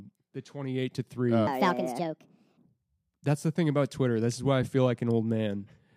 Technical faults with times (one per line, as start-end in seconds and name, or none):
1.47-2.66 wrong sample rate